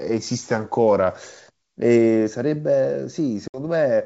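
At 3.48 s the call suffers packet loss on an ADPCM call: about 60 ms of audio, a few packets' worth, never arrives and is replaced by silence, so the speech drops into a hard-edged hole that runs to 3.59 s. Because the decoder's adaptive predictor and step size have drifted away from the sender's during the gap, the speech comes back slightly distorted before the decoder resynchronises, over the G.722 wideband link at 64 kbit/s.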